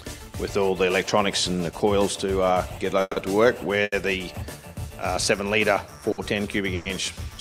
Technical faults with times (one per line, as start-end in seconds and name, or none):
3.01-3.18 call audio freeze
3.83-3.94 short stall from a late packet
6.12-6.20 short stall from a late packet
6.75-6.88 call audio freeze